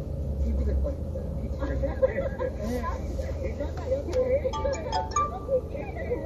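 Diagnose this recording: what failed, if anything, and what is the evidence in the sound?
The codec stage failed, with MP3 compression damage plainly audible throughout the clip. Nothing reaches above 12.5 kHz, so the top octave is simply missing. The sound has a watery, swirling quality. The likely cause is a starved MP3 encoder, consistent with a bitrate of about 48 kbps. Short of bits, it cut the treble at a fixed frequency. It also dropped weak spectral lines, which flicker on and off between frames and cause the swirl.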